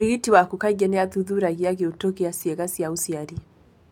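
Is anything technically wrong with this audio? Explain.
No, nothing in this speech recording stood out as a technical problem on listening.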